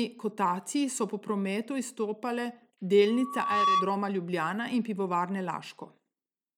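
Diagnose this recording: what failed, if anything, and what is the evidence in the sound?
Loudspeaker feedback squeal in the analogue acoustic loop: a 1.1 kHz tone swells over about half a second from 3.07 s to 3.96 s, standing roughly 5 dB above the speech. It shows as one bright horizontal spectrogram line.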